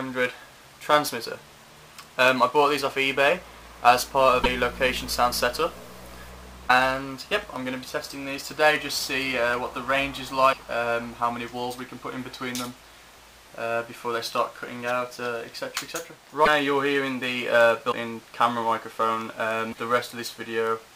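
Six short glitches occur at 4.43–4.46 s, 6.68–6.71 s, 10.52–10.55 s, 16.45–16.48 s, 17.91–17.94 s and 19.71–19.74 s. Each lasts roughly one 26.1 ms frame, and the sound skips ahead with a brief garbled disruption. The likely cause is a broken MP3 bit reservoir: after a cut, the next frame fetches its borrowed data from the wrong bytes. On a spectrogram each appears as a thin vertical stripe, and the waveform shows an abrupt discontinuity.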